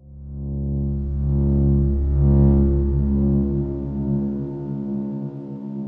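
No technical faults can be heard anywhere in the audio.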